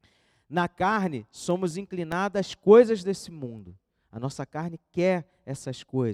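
From 1.50 to 2.53 s, just before "coisas desse mundo", CD scratch ticks: six regular clicks, about six per second, where a scratch defeated error correction. They show as thin vertical spectrogram lines and tiny waveform gaps, the longest about two milliseconds.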